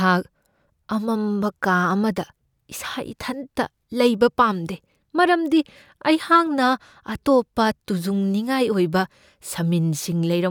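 No technical faults can be heard anywhere here.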